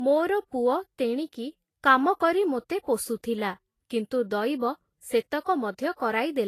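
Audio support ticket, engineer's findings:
Low-bitrate audio saved at a high bitrate, throughout. Speech band stops dead near 14.2 kHz, with smeared, swirly low-rate coding artefacts baked in. Likely an earlier low-rate encode (Vorbis-style) re-wrapped as high-rate MP3; the re-encode cannot restore what was discarded.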